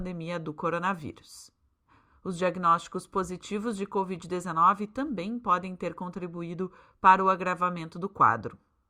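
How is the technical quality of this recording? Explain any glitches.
No technical faults can be heard in this recording.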